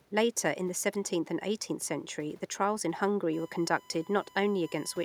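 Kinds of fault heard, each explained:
USB whine: current drawn by the USB bus in its regular 1 ms frames leaks into the audio through shared power or ground, leaving a steady, fixed-pitch 1 kHz whine under the speech from about 3.33 s onward, roughly 25 dB below it.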